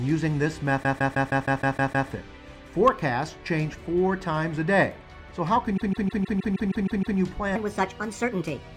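From 0.82 to 2.08 s the audio stutters through repeated frames: the same 157 ms block, which fits six compressed frames, plays eight extra times, adding about 1.25 s. The waveform shows identical copies tiled side by side, and the spectrogram a regularly repeating pattern. The same fault returns from 5.76 to 7.17 s, with nine extra plays of a 157 ms block and 1.41 s added.

From 7.56 s to the end, a section at the wrong speed plays 1.3 times too fast, likely from being fitted to the wrong clock. It sounds hurried and roughly five semitones higher. On the spectrogram the harmonics sit higher and more widely spaced, and in the waveform the events are compressed closer together.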